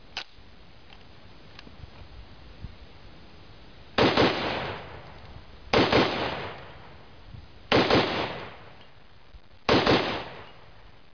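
No technical faults are audible.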